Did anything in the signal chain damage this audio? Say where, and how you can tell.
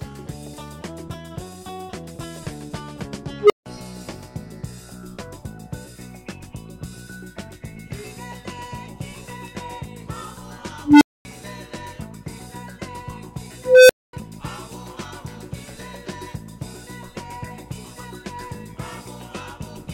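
Yes. An unstable filter in the processing stage, where a recursive filter's feedback ran away, damaged the audio at 3.40–3.66 s, 10.84–11.25 s and 13.58–14.13 s. Each time a tone near 400, 300 and 500 Hz swells over about 95, 170 and 315 ms, clips, then cuts to silence for 160, 240 and 240 ms until the filter resets. A spectrogram shows a single brightening horizontal line followed by a blank gap. The waveform shows an exponentially growing envelope hitting flat-topped clipping, then a dead-flat stretch.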